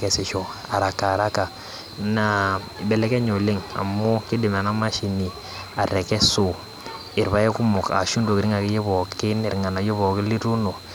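No technical faults can be heard anywhere here.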